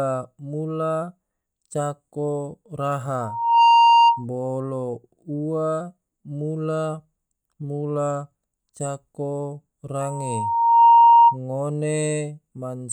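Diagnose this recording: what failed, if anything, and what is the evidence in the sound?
Loudspeaker feedback squeal, in the acoustic and analogue path: a 931 Hz tone swells from 3.21 to 4.25 s and from 10.01 to 11.37 s, peaking about 15 dB over the speech. The microphone hears its own loudspeaker, and loop gain exceeds one there. Unlike hum or a steady tone, it builds up gradually.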